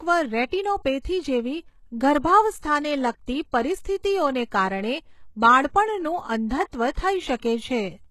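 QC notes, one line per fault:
Throughout: HE-AAC compression. The codec damage is plainly audible and nothing is present above 12.3 kHz. The treble sounds rebuilt rather than original, which fits the likely cause: HE-AAC at a low bitrate around 16 kbps, regenerating upper bands from copied lower ones.
2.18 s: DC step. The waveform's zero line jumps at this instant and the offset then decays away at a rate matching a 5 Hz high-pass. The jump is heard as a low thump or click while the speech itself continues unaffected.
3.26 s, 6.70–6.73 s, 7.37–7.42 s: pre-echo. Quantisation noise from a transform block leaks ahead of sharp attacks, spreading 16 ms, 33 ms and 56 ms respectively. A short hiss precedes each attack, which is itself softened or smeared.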